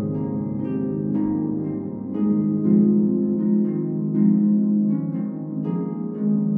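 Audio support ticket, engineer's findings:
No audible defects found in this recording; no action required.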